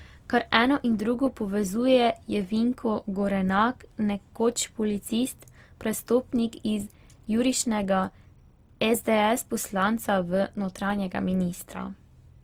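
Right through the speech there's a grainy, rough texture with a plainly audible noisy fizz rather than swirl. That's likely Opus compression, filling starved bands with folded or noise content. Bandwidth still reaches about 20.2 kHz, and the damage points to roughly 24 kbps in music mode.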